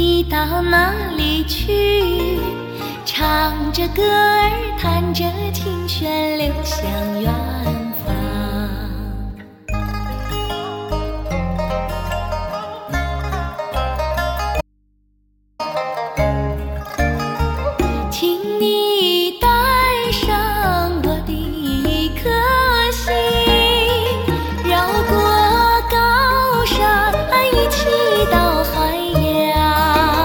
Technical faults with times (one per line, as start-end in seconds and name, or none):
14.61-15.59 audio dropout to a faint residue